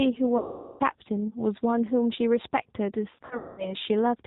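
The whole clip carries G.729 codec damage, plainly audible: the band stops at 4 kHz and the speech sounds rough and synthetic, which fits the 8 kbit/s G.729A variant rebuilding the voice from a filter, a pitch predictor and sparse pulses.

From 0.38 to 0.85 s, VoIP packet loss concealed by the speech codec wipes out about 420 ms. The decoder stretches its last pitch and filter into a fading buzzy tone or coloured noise. Between 3.16 and 3.75 s, further losses totalling 300 ms are scattered over 420 ms, with the longest run 210 ms. The sound breaks into buzz or coloured noise and stays weak and distorted until it recovers.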